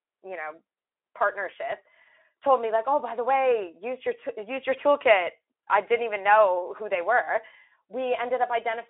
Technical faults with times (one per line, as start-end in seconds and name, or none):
none